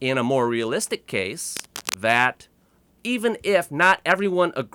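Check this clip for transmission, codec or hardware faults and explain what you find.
There's one hardware-type fault. From 1.52 to 1.94 s, right after "a more realistic", cable scratch noise adds a rough rustling burst, about 10 dB below the speech, likely from a worn cable or connector being moved.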